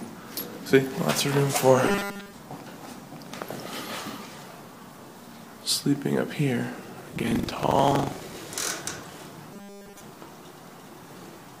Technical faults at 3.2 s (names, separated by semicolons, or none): none